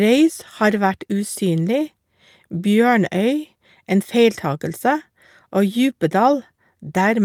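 No technical faults can be heard anywhere in the speech. Nothing in the recording needs a timestamp or further comment.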